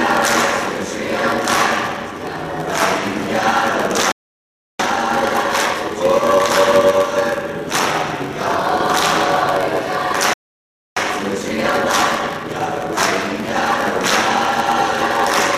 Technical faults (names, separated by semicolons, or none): block size mismatch (padded); playback stall; time-compressed catch-up